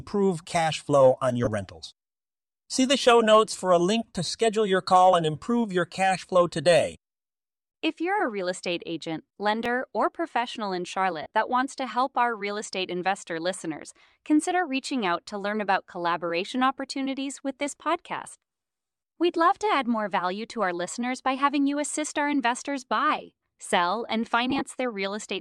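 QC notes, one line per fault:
9.66 s, dropped buffer (overrun): a small jump in the sound right after "a real estate agent" and before "or professional in", with no gap of silence. A few milliseconds of audio are gone and the two sides are butted together. This is likely a capture buffer that was overwritten before it was read.
1.44–1.48 s, 11.22–11.28 s, 24.50–24.62 s, lost LE Audio frames: short noisy smears replace the sound. The first lasts about 22.5 ms, which fits three 7.5 ms frames. The second comes after "or professional in" and before "that wants to help", with 75 ms lost over about 90 ms and the longest run near 40 ms. The third follows "investors buy sell and", with 45 ms lost over about 105 ms in runs of about 15 ms or less. During each gap the decoder repeated the last spectrum with scrambled phase, so tonal sound turns hissy.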